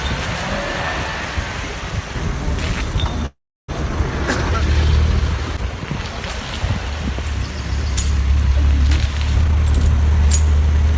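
A call audio freeze runs from 3.26 to 3.70 s. The last sound trails off as a short fading buzz, then goes silent for 340 ms before resuming exactly where it stopped. Unlike a dropout, nothing is lost; a gap is inserted. The likely cause is delayed packets draining the jitter buffer. A jitter buffer speed-up follows from 9.41 to 10.93 s: the sound plays at 120% speed with the pitch unchanged, which separates it from a resampling error, as about 0.3 s of pitch periods are cut away to shed built-up delay. Throughout, nothing is heard above 8 kHz, consistent with G.722 call coding.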